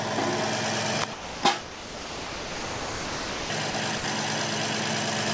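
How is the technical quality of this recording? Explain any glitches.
The recording has four dropouts where the sound gives way to steady, flat comfort noise: 1.13 to 1.43 s, a long stretch from 1.61 to 3.50 s, then brief ones at 3.71 to 3.74 s and 3.98 to 4.04 s. This is likely sound dropped by the voice detector. The sender judged the audio to be background, stopped transmitting, and the receiver filled the gap with synthetic noise until transmission resumed. Nothing reaches above 8 kHz, which fits a G.722 call path at 64 kbps.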